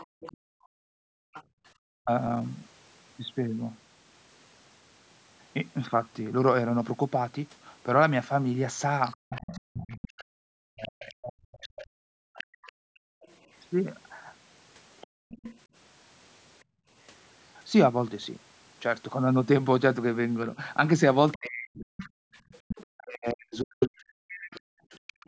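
From 0.0 to 1.43 s the echo canceller likely left part of the loudspeaker signal in the microphone path. The other side's voice leaks through, faint at roughly 20 dB below the talker. Overlapping it, from 0.06 to 1.64 s, the canceller clamps the microphone while the loudspeaker plays. The background is gated, dipping by as much as about 40 dB for roughly a second and a half before the room sound returns.

At 2.01 to 2.1 s both sides likely talk at once. The canceller cannot separate its own talker from the echo, so it suppresses the speech in double talk. The voice briefly drops by up to about 40 dB, a clipped gap of roughly a tenth of a second.

From 9.02 to 15.59 s the other side's voice leaks through again, likely residual echo, roughly 20 dB down. Inside that stretch, from 9.22 to 13.12 s, likely double talk suppression chops the talker repeatedly, with deep dips of up to about 40 dB adding up to around three seconds. 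From 15.07 to 16.89 s the canceller gates the background again, pulling it down by up to about 40 dB for roughly half a second in total.

From 20.56 to 25.16 s speech suppressed in double talk, likely, cuts the talker in pieces, roughly two seconds in all, with dips of up to about 40 dB. From 21.32 s to the end the leaking far-side voice is stronger, only about 15 dB under the talker. Throughout, the call microphone processing passes nothing above 8 kHz.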